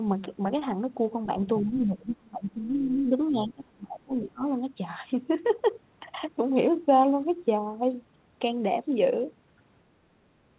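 A speech recording carried over a narrowband call line, with nothing above 4 kHz, which fits G.711 mu-law at 64 kbps. From 1.43 to 1.64 s the other side's voice leaks through, a second talker sitting roughly 10 dB below the main speech. It is most likely far-end audio from the loudspeaker that the echo canceller failed to remove. What separates it from room reverberation is that the intruding sound is a different voice, not a smeared tail of the talker's own. Right after, from 1.62 to 4.43 s, the talker's speech is suppressed in double talk, dipping by as much as about 25 dB across roughly three seconds. This is likely the canceller turning down everything while both sides spoke at once. Unlike packet loss, which leaves brief, hard gaps, these are level dips pumping over a long stretch, beginning just as the leaked voice ends.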